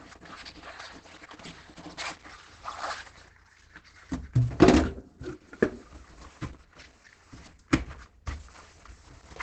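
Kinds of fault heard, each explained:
Opus compression: The sound is muffled and hoarse, with nothing above 8.6 kHz and heavy damage throughout, likely from Opus in its SILK speech mode at a rate near 12 kbps. Unlike MP3, it has few holes and swirls less, just dull, rough coarseness.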